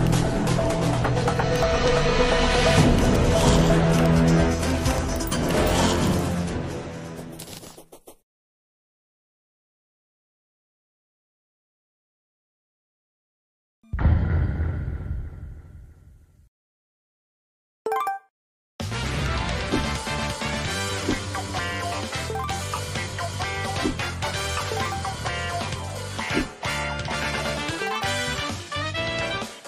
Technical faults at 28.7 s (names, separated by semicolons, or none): none